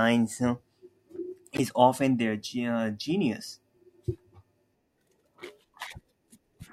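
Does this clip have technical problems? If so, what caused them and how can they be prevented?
Yes. From 1.54 to 1.60 s, just before "often their", a corrupt frame decoded fault produces a short glitch lasting about 60 ms, which points to roughly two damaged frames. Flipped bits led the decoder to misread gains and codes, so energy landed at the wrong frequencies, peaking around -10 dBFS. On a spectrogram it shows as a brief, sharp-edged block of misplaced energy; the waveform shows a sudden spike. Adding error detection, so damaged frames are concealed rather than played, would prevent it.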